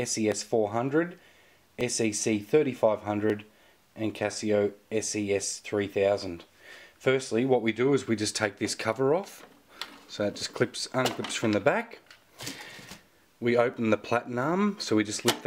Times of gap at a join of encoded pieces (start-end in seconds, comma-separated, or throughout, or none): none